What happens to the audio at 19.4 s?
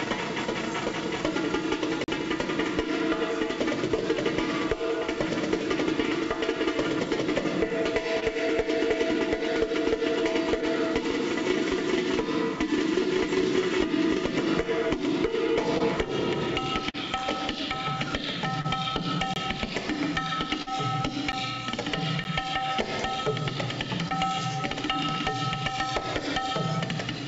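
Just before 19.4 s, from 19.34 to 19.36 s, there is a block of digital silence: roughly 24 ms of samples are replaced by zeros. The signal drops out and returns with no fade, leaving a brief hole.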